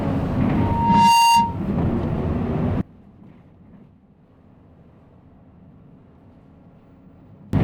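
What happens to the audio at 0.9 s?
At 0.9 s the system is caught in loudspeaker feedback squeal, running from 0.56 to 1.58 s. A microphone is picking up the loudspeaker it drives, and at 929 Hz the loop gain tops one, so that frequency feeds on itself. The result is a steady tone that swells over roughly half a second into a squeal sitting about 5 dB above the rest of the sound, then stops.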